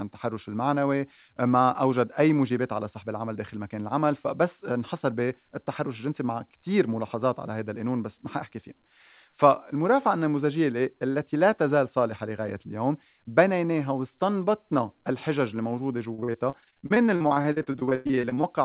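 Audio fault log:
16.14–18.45 s, repeated packet loss (robotic sound): the speech breaks into dozens of short holes, the longest 100 ms. Each hole is filled by stretching the last sound. About 39% of the stretch is patched this way, which gives the choppy sound.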